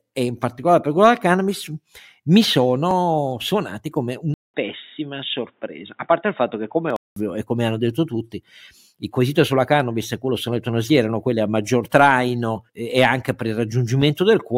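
At 2.91 s and again at 6.90 s the sound skips very briefly, a few milliseconds lost and joined without silence. The 4 s spacing points to likely audio missing between chunks, with no change in tone. From 4.34 s to 7.16 s, after a 200 ms silence, the sound turns dull and boxy, with nothing above 3.8 kHz and a new noise floor about 45 dB down. This is likely an input switched to a poorer device, heard as a lasting tonal change at an unchanged level rather than a skip.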